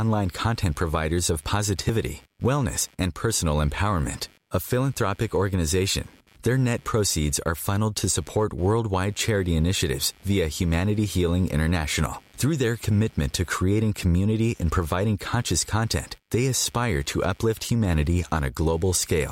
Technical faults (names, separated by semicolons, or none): computer activity noise; dropped buffer (overrun)